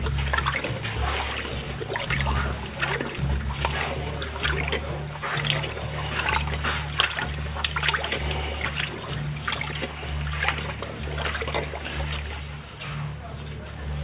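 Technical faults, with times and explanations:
No technical faults can be heard; the signal stays continuous and steady in level, with nothing breaking into it at any point.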